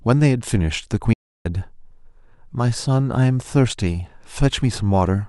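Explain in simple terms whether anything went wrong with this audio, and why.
At 1.14 s the speech cuts off and returns at 1.45 s, leaving about a third of a second of total silence with no background sound at all. This is an audio dropout to silence, likely from the input signal briefly disconnecting or muting while recording continued.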